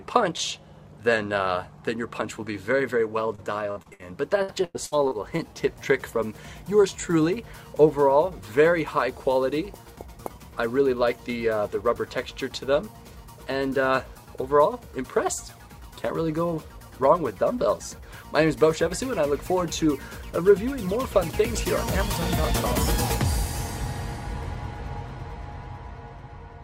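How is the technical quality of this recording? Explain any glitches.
Two short bursts of repeated packet loss (robotic sound) break up the recording, from 3.35 to 4.04 s and again from 4.42 to 5.40 s. Packets kept going missing or arriving late, and each hole was covered by stretching the last received sound forward. About 26% and 29% of the two stretches is this patched-in material, with the longest holes about 58 ms and 99 ms. The result is choppy stuttering with small pieces of audio missing.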